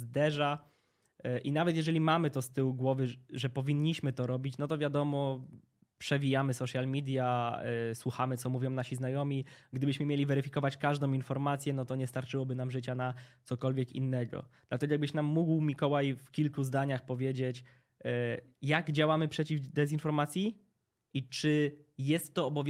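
Listening to the speech in the clip, nothing stood out as a technical problem.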